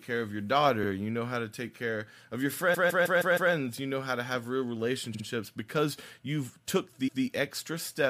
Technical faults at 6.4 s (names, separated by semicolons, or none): none